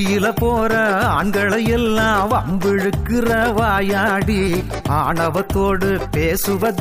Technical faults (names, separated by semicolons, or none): none